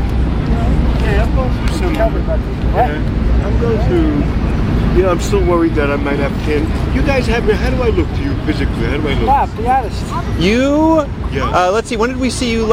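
Sample clock jitter runs through the whole clip. The converter's timing wobbles by something like a couple of microseconds, so each sample lands a touch early or late. That timing error turns into an amplitude error wherever the waveform is moving fast, so you get a fine hiss or grit that swells on loud, bright passages and drops away in the quiet gaps. Here it sits somewhere around 45 dB under the signal.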